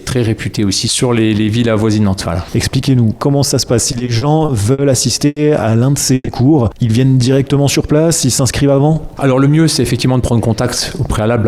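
From 3.91 to 4.81 s the audio drags in repeated stalls, a stutter. The packets were arriving late or too slowly, so the jitter buffer kept running dry. Six gaps open up. The receiver bridged each one by extending the last sound. Together they fill 150 ms, about 17 percent of that stretch. The longest is 60 ms. Nothing is lost. The flow just hitches and limps.

At 5.26 s a call audio freeze follows, lasting until 5.39 s. The sound holds and stretches for 100 ms, fading to about 10 ms of silence. Then it resumes where it stopped. A second freeze runs from 6.14 to 6.30 s. Here 130 ms is filled, ending in 20 ms of silence. No audio is missing. A gap has simply been inserted. The likely cause is packets held up in transit, adding 100 ms and then 130 ms of delay.

From 9.27 to 11.30 s a jitter buffer speed-up sets in. The buffer had built up more audio than it wants. To shrink that delay, the receiver cut tiny pitch-length slices over and over. 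Around 150 ms disappears this way. Playback runs at 107 percent speed with no change in pitch. The audio sounds rushed through this stretch.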